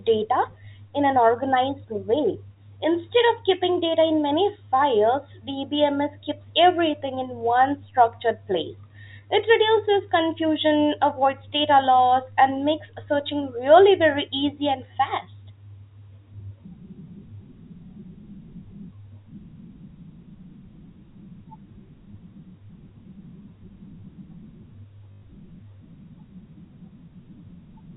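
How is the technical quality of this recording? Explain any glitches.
One glitch stands out, heard over telephone-band audio that stops at 4 kHz. Packet loss with last packet repeated occurs from 25.12 to 25.22 s: about 100 ms of audio went missing, which fits five lost 20 ms packets. The receiver replayed its last packet to fill the gap, and because the repeats seldom line up with the pitch, they form a brief 50 Hz robotic buzz.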